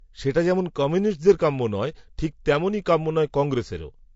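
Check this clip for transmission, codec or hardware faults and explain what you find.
One codec fault runs through the whole speech clip: low-delay AAC compression. Its short transform frames resolve pitch harmonics poorly, so the voice sounds rough and grainy, with noise filling the gaps between harmonics and a thin, partly synthetic top band. The damage is plainly audible and likely comes from AAC-ELD at roughly 32 kbps. Unlike packet loss, it is constant and has no dropouts or gaps.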